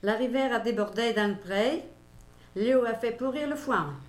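A steady, raspy buzz enters at 1.17 s and runs to the end of the audio, sitting roughly 30 dB below the main sound. This is mains buzz at 60 Hz. Sharp switching spikes from a dimmer, a rectifier or an unshielded cable leak into the signal twice per mains cycle, 120 times a second, and the dense 60 Hz harmonics they generate give it a rasp rather than a smooth hum.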